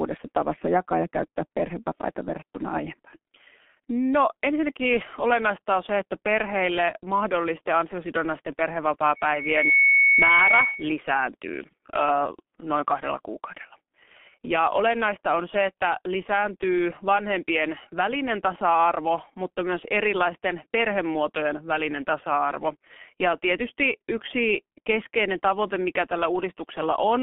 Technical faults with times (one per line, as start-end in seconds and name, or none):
0.00-27.22 G.723.1 codec
9.15-10.94 loudspeaker feedback squeal